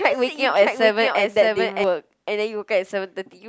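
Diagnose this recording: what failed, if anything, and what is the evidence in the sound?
A doubled audio track runs from the very start of the speech to 1.84 s, where the second copy cuts off abruptly. A full-band duplicate trails the original by roughly 0.7 s at about 5 dB lower level, with no reverberant tail or room colouring, so it is not an acoustic echo. This most likely happened at the capture or edit stage: a second, slower path recorded the same signal, or an edit left two out-of-step copies overlapping.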